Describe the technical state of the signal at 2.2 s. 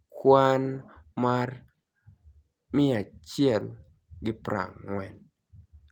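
At 2.2 s the signal is intact, with no dropout, distortion, noise burst or other technical fault audible at that point.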